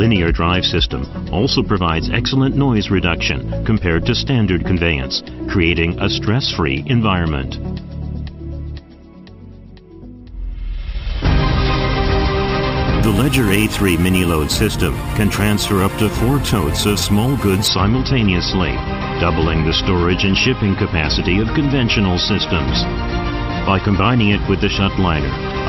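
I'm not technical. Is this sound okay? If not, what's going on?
No. Between about 13.03 and 17.68 s there's imaging from sample-and-hold upsampling. That stretch was converted from a low rate of 12 kHz up to 44.1 kHz by simply repeating each sample, with no smoothing. The result is a bright, metallic fizz in the 6 to 12 kHz region riding on top of the sound. It gets louder and quieter along with the audio, and its pitch slides the opposite way when the sound's pitch moves.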